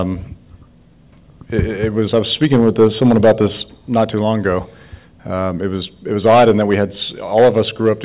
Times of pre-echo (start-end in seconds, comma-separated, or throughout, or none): none